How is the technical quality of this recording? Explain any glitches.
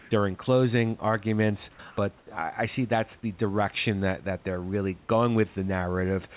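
Two short patches of the background have been replaced. The call path cuts off everything above 4 kHz, as expected for G.711 narrowband, and the room noise sits about 34 dB below the speech.

Comfort noise in place of the background runs from 0.00 to 0.11 s, just before "during closing arguments", about 3 dB louder. It happens again from 2.18 to 2.27 s, about 5 dB quieter. The likely cause is discontinuous transmission substituting smooth synthetic hiss, which shows as a flat, textureless band on the spectrogram and a small level step on the waveform.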